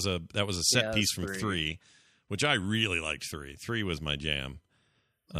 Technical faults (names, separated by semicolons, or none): none